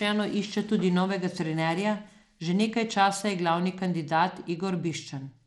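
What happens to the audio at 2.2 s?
At 2.2 s the speech has gritty, coarse treble, and nothing reaches above 17 kHz. It lasts the whole clip. The likely cause is Bluetooth SBC compression starving the top sub-bands, consistent with about 96 kbps.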